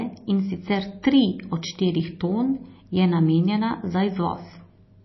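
A starved encoder, likely MP3 compression at a very low bitrate, consistent with something around 24 kbps, shapes the speech from start to finish. With too few bits to go round, the treble is cut off entirely above 5.8 kHz, leaving the sound dull, while weak frequency lines drop in and out between frames. The result is a plainly audible watery, swirling texture, with s sounds turning metallic and consonant attacks smearing.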